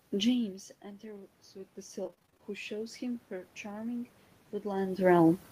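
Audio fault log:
0.35–5.01 s, automatic gain rising: the sound at the microphone drops by about 16 dB early on, as the talker moves back near 0.5 s, and the gain control slowly climbs by about 8 dB to compensate. The room noise rises with the speech, so the whole background swells. On a waveform the envelope and the noise floor widen steadily over several seconds. On a spectrogram the noise band brightens gradually across all frequencies.
2.03–2.43 s, repeated packet loss (robotic sound): a quick run of roughly ten short dropouts, the longest about 29 ms, each one patched by stretching the preceding sound. Nearly half of this 0.4 s stretch is concealment, which makes the speech choppy and robotic. On a spectrogram the harmonics turn into repeated, frozen blocks with hard vertical edges. On a waveform the same short cycles repeat, broken by abrupt joins.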